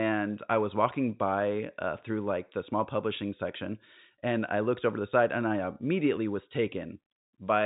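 Nothing goes wrong here; the speech just has the familiar phone-line sound of G.711 telephone coding, with everything above roughly 3.8 kHz cut away as that format does.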